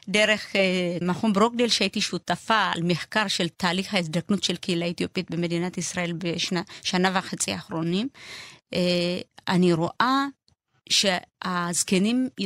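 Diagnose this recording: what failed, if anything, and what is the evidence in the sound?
No failure detected.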